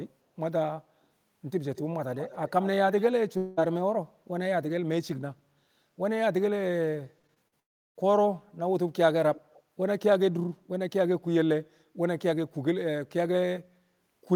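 An echo canceller on a loudspeaker end likely failed to remove what its microphone picked up, so an echo leak returns the sound about 227 ms late: at 1.75–1.81 s and 2.15–2.69 s roughly 15 dB below the direct sound, then at 2.92–3.04 s fainter, around 25 dB down.

A long network dropout, likely from audio failing to arrive for about 0.2 s, follows at 3.37–3.59 s. The receiver stretches the last sound over the gap as a fading buzz, and the sound resumes with that stretch missing.

Repeated packet loss from 7.19 to 7.54 s leaves four holes, the longest 38 ms. Each is patched from preceding audio, covering about 31% of the span and giving a choppy texture.

A second long network dropout runs from 7.60 to 7.97 s. The patching fades almost at once, leaving silence across nearly all of that 0.37 s before the sound returns.

At 9.34–9.62 s the echo leak comes back, now about 239 ms behind and around 25 dB down, as a faint repeat.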